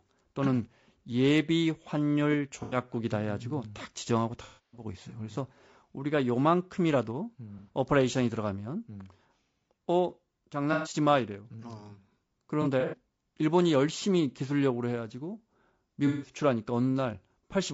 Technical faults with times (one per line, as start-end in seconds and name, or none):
0.00-17.73 low-delay AAC compression
2.63-2.77 AAC frame loss with concealment
4.43-4.84 AAC frame loss with concealment
7.58-7.69 AAC frame loss with concealment
10.73-10.93 AAC frame loss with concealment
12.62-12.96 AAC frame loss with concealment
16.07-16.32 AAC frame loss with concealment